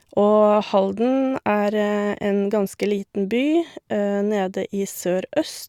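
Nothing goes wrong anywhere in this speech recording, so there's no fault to point to and nothing to place on the timeline.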